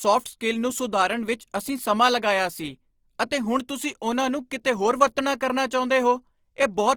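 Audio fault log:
Throughout: Opus compression. The speech sounds grainy and rough with full bandwidth kept, likely from music-mode Opus near 24 kbps filling starved bands with folded spectrum or noise.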